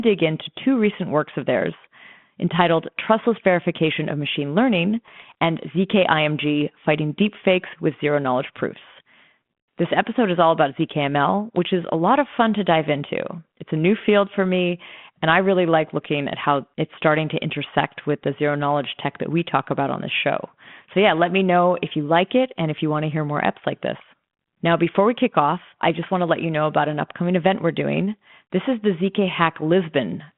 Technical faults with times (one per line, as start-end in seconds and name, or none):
5.06-5.35 bit errors on an ADPCM link